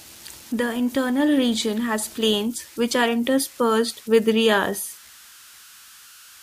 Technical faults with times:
0.00-6.42 converter idle tones

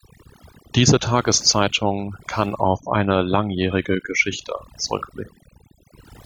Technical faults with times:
0.00-6.26 overdone noise removal

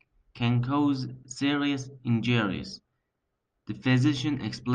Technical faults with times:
none

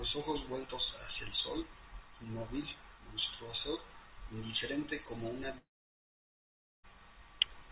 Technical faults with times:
5.58-6.85 long network dropout

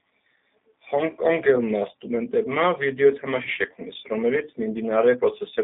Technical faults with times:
0.00-5.63 G.729 codec

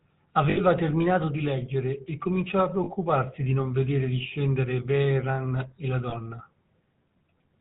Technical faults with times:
0.00-7.60 GSM full-rate codec
0.50-0.59 lost GSM frames
2.84-2.89 lost GSM frames
6.10-6.14 lost GSM frames

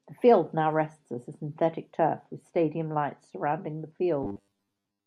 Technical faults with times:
4.23-5.06 robotic sound from repeated short buffers

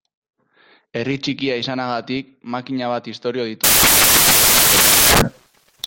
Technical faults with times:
3.64-5.87 samples built from the wrong bytes

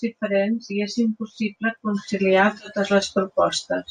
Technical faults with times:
none

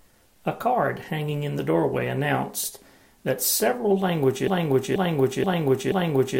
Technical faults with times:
4.48-6.39 broken-record loop

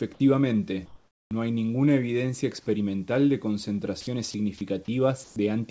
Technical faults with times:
0.86-1.31 comfort noise in place of the background
1.28-1.31 onset clipped by the voice detector
4.01-4.34 sound dropped by the voice detector
5.24-5.36 comfort noise in place of the background
5.33-5.36 onset clipped by the voice detector

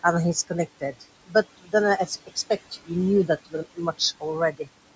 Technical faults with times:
0.00-4.95 noise suppressor artifacts
0.03-1.74 speech cut by the noise suppressor
2.06-2.37 speech cut by the noise suppressor
2.71-2.91 speech cut by the noise suppressor
3.27-4.69 speech cut by the noise suppressor

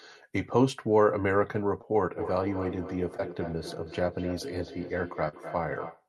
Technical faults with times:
1.81-1.85 short concealed packet loss
2.16-6.08 feedback echo between two devices
3.17-3.20 short concealed packet loss
5.28-5.35 short concealed packet loss

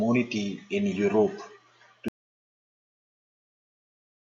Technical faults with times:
2.08-4.28 audio dropout to silence

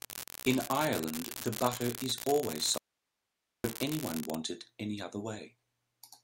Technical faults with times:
0.00-4.37 unreliable data bit
2.78-3.64 audio dropout to a faint residue

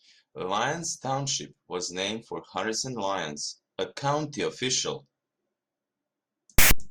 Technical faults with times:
6.58-6.71 file tags played as audio

